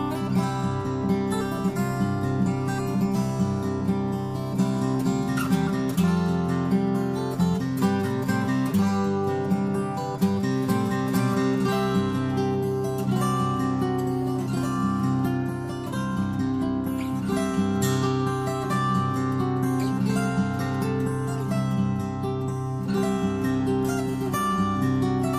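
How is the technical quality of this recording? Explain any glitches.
No glitches detected; the recording is technically sound throughout.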